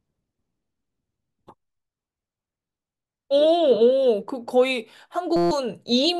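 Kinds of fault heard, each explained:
System hang loop: from 5.36 to 5.51 s the speech gives way to a steady 172 Hz buzz, because the driver stalled while the hardware kept replaying one 5.8 ms slice of its ring buffer, which fits a 256-sample buffer, 25 times over.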